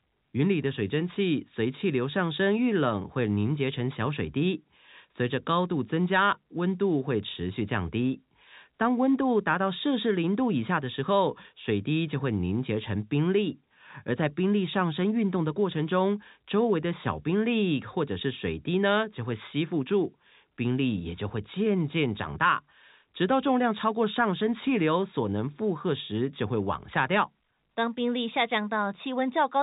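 Nothing stood out on listening to this telephone-band speech recording.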